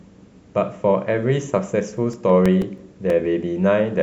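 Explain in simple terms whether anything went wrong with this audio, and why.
Something did go wrong. From about 1.97 s to 3.58 s the speech picks up a run of CD scratch ticks: eleven little clicks or micro-dropouts, roughly seven a second, each lasting at most a few milliseconds. A scratch on the disc wiped out more data than the player's error correction could rebuild, once on every turn, so the player patched or muted those tiny gaps, and each patch came out as a tick.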